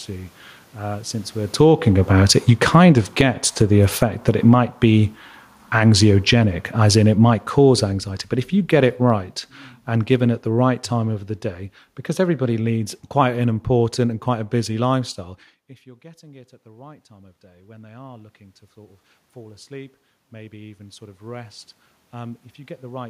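From 1.46 s to 15.08 s the automatic gain falling fault pulls the level down by about 25 dB. Around 1.5 s the talker shifts position, and the gain control responds by lowering its gain over those 13.6 seconds, having judged the input too loud or its background noise too strong. Speech and room noise sink together. On the waveform the envelope tapers steadily. On a spectrogram the whole band, the noise floor included, dims gradually from left to right.

From 15.18 s to 23.05 s the automatic gain rising fault follows. Near 15.5 s the talker moves away and the input drops by about 21 dB. The gain control finds the signal too quiet and slowly raises its gain by about 11 dB, recovering only about half of what was lost. Voice and background swell together over nearly eight seconds. The waveform envelope climbs gently but stays below its earlier height, and the spectrogram, room noise included, brightens evenly across all frequencies.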